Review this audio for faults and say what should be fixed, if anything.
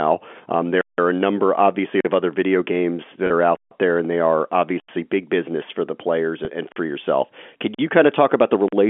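Block of digital silence: the audio path failed to fill its output buffer in time, so whole blocks were written as zeros. Each one cuts the sound out and back with no fade and leaves a hole in the speech:

0.81–0.98 s (170 ms)
2.01–2.05 s (43 ms)
3.56–3.71 s (149 ms), just before "there and they are"
4.80–4.89 s (85 ms)
6.72–6.76 s (43 ms)
7.74–7.79 s (43 ms), just before "you kind of talk"
8.68–8.73 s (43 ms)

The recurring 43, 85 and 170 ms lengths fit buffers of 2048, 4096 and 8192 samples at 48 kHz. Prevent this by giving the audio thread real-time priority and a larger buffer, so every block is delivered on time.

Packet loss with pitch repetition: one 30 ms packet went missing at 3.27–3.30 s, right after "of other video games", and another at 6.45–6.48 s. Both times the receiver bridged the gap by repeating the last pitch period, which is heard as a brief held, buzzy stretch. The G.711 A-law telephone band carrying the call sounds as expected. 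Prevent this with a larger jitter buffer or forward error correction on the network link.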